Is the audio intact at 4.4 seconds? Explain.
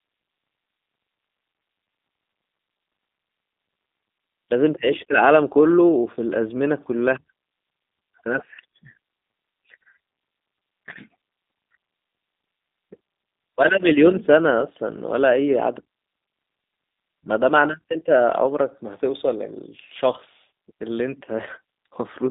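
No. The G.729 codec runs throughout. Speech is rebuilt from a filter, pitch predictor and sparse pulses, fitting 8 kbit/s. It sounds rough and synthetic, with nothing above 3.8 kHz.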